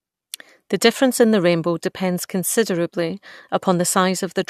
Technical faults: none

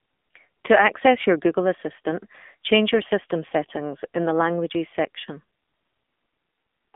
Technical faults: AMR narrowband mobile codec

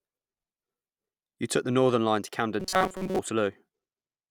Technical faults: robotic sound from repeated short buffers

